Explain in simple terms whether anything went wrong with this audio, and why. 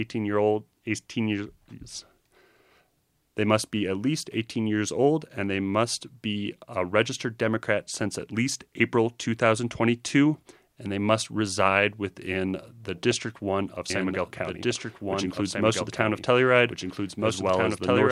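Something does go wrong near the end. At 13.90 s a doubled audio track begins and lasts until the clip finishes. The same speech plays twice, with a second copy trailing about one and a half seconds behind the first. That copy is somewhat quieter but just as clear. It has no fading tail like a real echo, and it cuts in suddenly. The likely cause is the sound being recorded a second time through a slower path.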